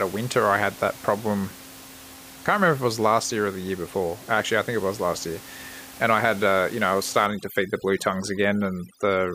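A speech clip with overdone noise removal from 7.26 s, just after "you know I was", to the end at 9.34 s. A noise reducer set too hard starts cutting individual frequency bands whenever they sit near its noise estimate, so the room noise, which before this point sits about 19 dB under the speech, drops and breaks up into twinkling specks, and the quieter parts of the voice are cut along with it. Low-bitrate codec damage can sound similarly swirly, but here the background itself is hollowed out.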